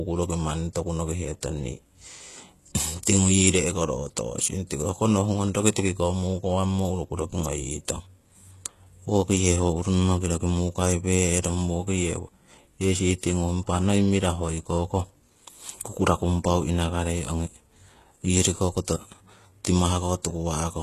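Across the whole speech recording the treble sounds synthetic: s sounds come out gritty and lispy, with a metallic sheen that doesn't sit naturally on the lower voice. That points to HE-AAC compression as the likely cause, with damage plainly audible at a rate consistent with roughly 16 kbps. Only the lower band is coded directly; the top is rebuilt by spectral band replication, so its harmonics don't line up with those below. A spectrogram shows copied, blocky upper-band patterns and nothing above 12.3 kHz.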